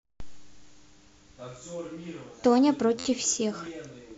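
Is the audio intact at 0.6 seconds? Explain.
No. Repeated frames occur from 0.54 to 0.64 s: a 93 ms block, which fits a run of four compressed frames, plays twice, producing a brief stutter and lengthening the audio by 93 ms. On a spectrogram, the same short pattern appears twice, back to back.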